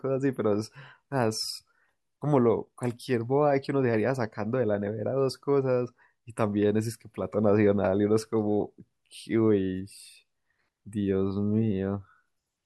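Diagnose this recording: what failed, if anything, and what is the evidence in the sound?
Nothing failed; no audible faults anywhere in the recording.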